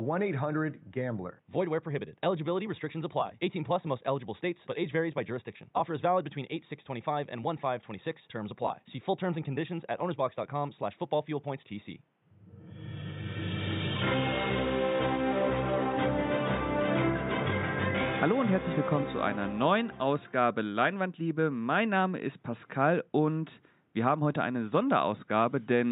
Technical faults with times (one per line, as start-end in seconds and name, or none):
none